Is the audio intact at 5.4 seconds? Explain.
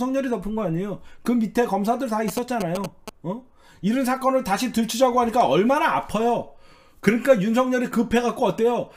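Yes, the audio at 5.4 seconds is intact, with no dropout, click, distortion or other fault at that point.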